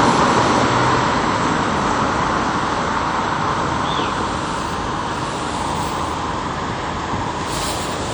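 Throughout, the sound rings and smears. A washy hiss rises and falls with the signal. Faint detail drops away. This is likely WMA compression. Long transform blocks spread quantisation noise over tens of milliseconds, which fits a low bitrate near 48 kbps.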